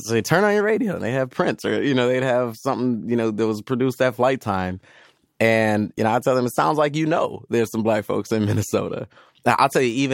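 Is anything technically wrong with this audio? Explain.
No, no technical faults heard.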